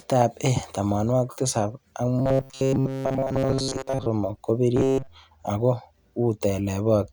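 From 2.19 to 4.06 s and 4.77 to 5.08 s, the speech becomes a rigid metallic buzz fixed at 134 Hz: robotic sound from repeated short buffers, likely a 7.5 ms chunk replayed over most of each stretch. Unlike codec warble, the buzz rate never moves.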